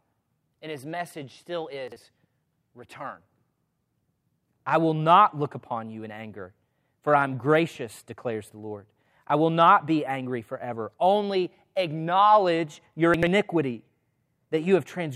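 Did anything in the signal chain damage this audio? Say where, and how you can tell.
Yes, the driver or buffer stage delivered chunks out of order, with blocks of about 43 ms arriving late. At 1.88 to 1.96 s, after "his message still," one chunk plays a slot late. At 13.14 to 13.27 s, after "acknowledge your," it is two chunks late. Both spots sound jumbled.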